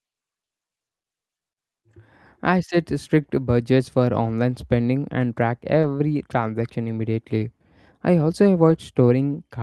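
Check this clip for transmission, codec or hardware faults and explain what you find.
Two kinds of network fault appear in this speech: packets rebuilt from error correction, and one short concealed packet loss.

Lost packets rebuilt from error correction occur at 3.23 s (after "I set", before "budgets for"), 4.51 s (after "budgets for", before "spending and track"), 5.83 s (after "spending and track", before "transaction immediately I also"), and 8.69–8.75 s. The last one points to two separate lost packets. In each case the next packet carried a low-bitrate copy, and the decoder played it. The result is no gap, only brief roughness and noise.

A short concealed packet loss occurs at 5.81–5.85 s, about 20 ms. The receiver extrapolated the previous sound and faded back in, so it is heard as a smear or wobble.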